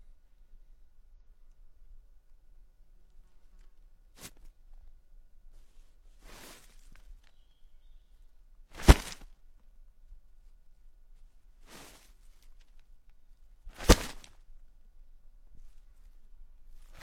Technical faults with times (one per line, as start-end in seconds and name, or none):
1.13 damaged data in a compressed stream
9.19-9.24 damaged data in a compressed stream
12.05-12.10 damaged data in a compressed stream